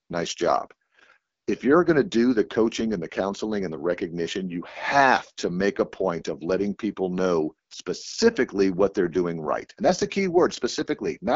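From start to finish the speech has passed through the AMR wideband (HD Voice) codec at a very low rate, which fits its 8.85 kbit/s mode, one of the two lowest. The pulse-driven vocal tract model gets too few bits to track the voice, so the damage is plainly audible: a rough, raspy texture. Content stops at about 7.5 kHz, and the top band is only shaped noise.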